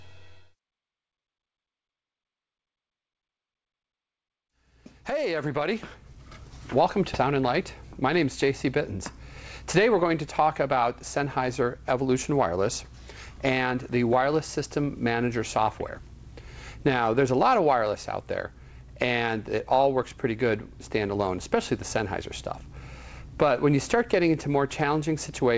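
A stretch of audio was dropped, in transit or by a jitter buffer that overflowed with later audio already waiting, at 7.14 s, producing a skip ahead. Roughly 0.4 s of audio is missing, and playback jumps straight forward with no gap or fill, the two sides butted together. Soon after, the buffer was holding more audio than its target, so it trimmed short pitch-period pieces repeatedly in a jitter buffer speed-up: 8.17–8.99 s at 105%, then 9.80–10.77 s and 11.21–12.58 s at 106%, removing somewhere around 50 to 100 ms each time. The audio runs slightly hurried at unchanged pitch. Throughout, content stops at 8 kHz, which fits a G.722 call codec at 64 kbps.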